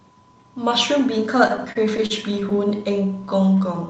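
From 1.47 to 2.59 s the speech catches and drags in ten brief hitches, the longest 38 ms, adding 141 ms of bridged sound with nothing lost. These are repeated stalls (stutter): packets arrived late, the jitter buffer kept running dry, and the receiver stretched the last sound across each wait.

From 3.49 to 3.87 s the speech runs at 90% speed with its pitch unchanged, drawing the passage out by 45 ms. This is a jitter buffer slow-down: with its reserve low, the receiver repeated single pitch periods or fragments of pauses to rebuild it. Throughout, the audio's top end stops around 8 kHz, which fits an Opus call path running near 32 kbps.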